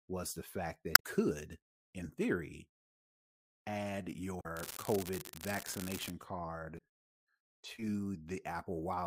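Damaged data in a compressed stream first appears between 0.93 and 1.02 s, right after "was the fact" and before "could in theory". Bytes in the compressed stream were corrupted, so the decoder misreads the affected frames, loses sync and hunts for the next valid frame header. For roughly 90 ms the speech gives way to a chirp, squawk, click or short hole. The same fault returns at 4.37 to 4.46 s, again lasting under a tenth of a second.

From 4.56 to 6.11 s an unreliable data bit takes over. One marginal data line flips its bit in a random share of samples, and each wrong bit adds a spike of identical size to the waveform. For about one and a half seconds this produces a steady crackle or fizz laid over the speech, and it continues through the pauses as well.

Damaged data in a compressed stream appears once more at 6.75 to 6.80 s. This is the shortest instance, a brief blip of about 50 ms caused by corrupted frames.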